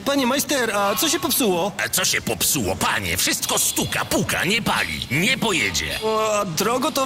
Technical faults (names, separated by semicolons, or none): none